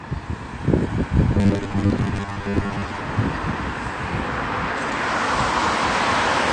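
Right from the start the whole clip is dulled and smeared, with nothing above about 9.9 kHz and a plainly audible warbly, fizzy texture. That's likely AAC compression, with the encoder throwing away the top end and coarsening what's left, which fits a bitrate around 32 kbps.

From 1.35 to 3.0 s the sound turns into a rigid metallic buzz pitched at 100 Hz. This is robotic sound from repeated short buffers, likely caused by audio arriving too seldom. The gaps get patched by looping a 10 ms chunk, so roughly half of that stretch is repeats rather than real audio.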